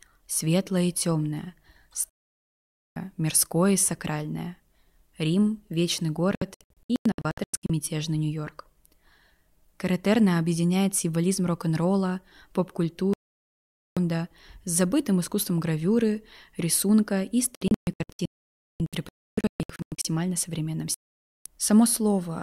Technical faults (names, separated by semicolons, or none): digital broadcast dropout